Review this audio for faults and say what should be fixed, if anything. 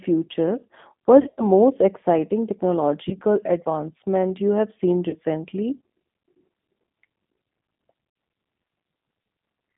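G.729 codec damage runs through the whole speech clip. The sound is confined to a telephone band of roughly 150 Hz to 3.6 kHz and has the slightly rough, synthetic texture of an 8 kbit/s coder. This codec doesn't send the waveform itself; it sends a vocal tract filter, a pitch predictor and a handful of pulses per frame, and the decoder rebuilds speech from those. The damage here is plainly audible. Carrying the call on a wideband or higher-rate codec such as G.722 or Opus would prevent it.

VoIP packet loss concealed by the speech codec occurs at 1.22 to 1.42 s, 3.09 to 3.15 s, 5.09 to 5.16 s and 8.10 to 8.16 s. The first is the worst: 120 ms of audio went missing, scattered over 160 ms, with the longest gap 80 ms. The others lose 20, 40 and 60 ms. In each gap the decoder extrapolated from its last pitch and filter, fading the gain, so the sound smears into a buzzy or noisy tail. Because each frame builds on the last, the voice stays weak for a short while after packets return. 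A larger jitter buffer, forward error correction or packet redundancy on a cleaner network path would prevent these dropouts.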